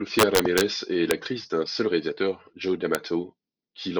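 Integer overflow is what's cracking this speech. From 0.19 to 0.61 s the level runs about 3 dB past the integer ceiling, and instead of being held there the samples wrap straight round to the opposite sign, so each peak flips across the full range and you get violent snaps, much harsher than clipping. There are two more single cracks at 1.11 s and 2.95 s, where peaks only just reach the limit and wrap.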